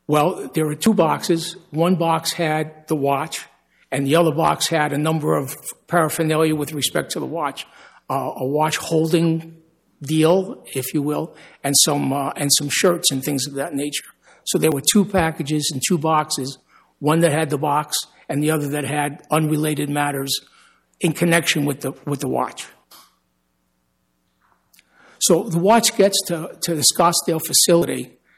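At 0.86 s, 14.72 s and 27.82 s the sound jumps forward. Each jump skips about 30 ms with no gap of silence. This is likely a dropped buffer (overrun): samples were overwritten before being read, and the edges were joined.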